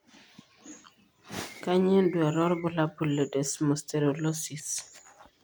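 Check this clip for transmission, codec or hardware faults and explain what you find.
Nothing in the speech stood out as a problem on listening.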